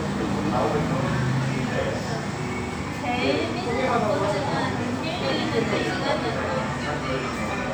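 No technical faults can be heard anywhere in this audio.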